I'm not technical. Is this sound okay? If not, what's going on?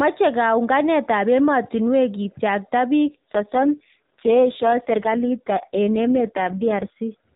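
No. From 3.09 to 7.00 seconds there is an AMR rate drop. The phone network switched the call's speech coding to a much lower quality to cope with a weak signal. The speech turns rougher and more robotic there, though nothing cuts out.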